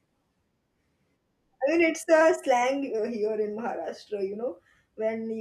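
From 2.21 to 2.99 s the speech runs 5.3% fast and about 90 cents sharp, then snaps back: likely a drift correction step in clock-matching software.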